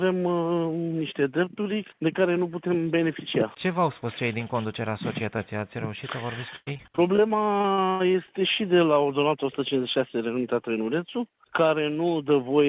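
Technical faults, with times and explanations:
6.56–8.32 s, repeated packet loss (robotic sound): packets keep going missing in quick succession, and each hole is patched by stretching the last bit of sound. About a quarter of the stretch is fill, with gaps up to 105 ms, hence the choppy feel.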